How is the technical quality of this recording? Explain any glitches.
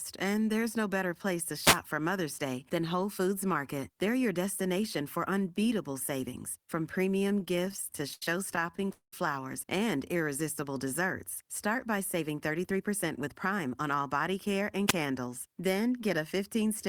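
The recording has a handful of clear glitches: two radio noise bursts, a stretch of stuttering, and a couple of timing adjustments where the playback speed shifts.

The first wireless microphone noise hit lands at 1.59 to 1.80 s, and a shorter one comes at 14.87 to 14.93 s, right after "care and". Both are quick swishes of static. With an analogue FM mic, reflections of the radio signal can momentarily cancel each other. The signal fades, the receiver's own hiss jumps up over the speech, and then it clears.

The repeated stalls (stutter) run from 7.14 to 9.13 s, just after "for unbeatable savings from". Packets were arriving late, so the jitter buffer kept running dry, more than two dozen times. Each time the receiver stretched the last bit of sound to cover the gap, about 530 ms in total and roughly a quarter of that stretch. The longest hold was about 200 ms. Nothing actually drops out, but the speech drags and hiccups.

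There's a brief jitter buffer slow-down at 9.97 to 10.24 s. The buffer was low, so the receiver repeated single pitch periods to build up a reserve. That added about 39 ms and ran the speech at 89% speed. The pitch stays put, but the sounds come out a little drawn out.

The jitter buffer speed-up goes the other way, from 12.21 to 14.10 s, ending just before "care and". The buffer had too much audio queued, so the receiver trimmed tiny pitch-period slices, around 150 ms in total. Speech runs at about 107% speed there with no change in pitch, so it comes across as slightly hurried.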